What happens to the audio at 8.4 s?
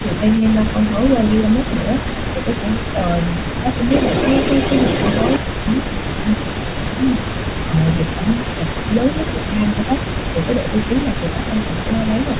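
Between 7.66 and 8.94 s the voice suffers speech suppressed in double talk, dipping by up to about 15 dB for roughly a second in total, likely because the echo canceller could not tell its own talker from the loudspeaker echo and turned both down. Throughout the clip, including this moment, an echo leak adds a copy of the voice about 10 dB down and 152 ms late, likely residual loudspeaker pickup.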